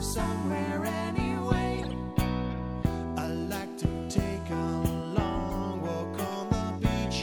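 From 1.78 to 1.94 s and 5.50 to 5.53 s, each corrupt frame decoded misplaces energy, giving a chirp, squeak, blip or noise burst seen as smeared, misplaced spectral blocks.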